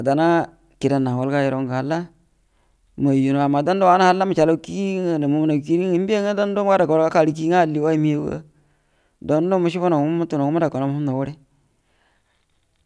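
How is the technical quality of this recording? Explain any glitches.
Nothing in this recording stood out as a technical problem on listening.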